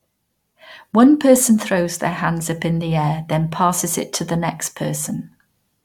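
No technical faults can be heard anywhere in the speech, and the signal stays continuous without any audible disruption.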